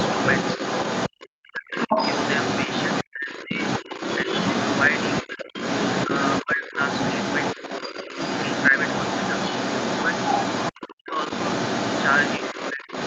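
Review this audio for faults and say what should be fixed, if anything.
The other side's voice leaking through runs the whole clip at about the same level as the talker. It's likely a loudspeaker on the talker's end feeding the mic, with the echo canceller not removing it. A headset, or a better-converging echo canceller, would prevent it.

Speech suppressed in double talk hits at 1.23–1.94 s, 3.04–3.51 s, 5.23–5.53 s, 6.43–6.78 s, 10.73–11.17 s and 12.73–12.88 s. The talker ducks by around 40 dB at worst and about 10 dB at mildest, likely because the canceller mistook overlap for echo. Sharper double-talk detection would stop it.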